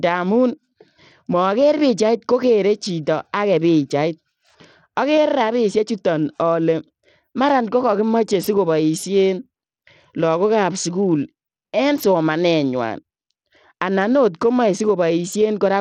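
Throughout the speech, treble flickers and a gritty haze sits on it, with nothing above 18.5 kHz. This is likely Bluetooth SBC compression, fitting roughly 80 kb/s.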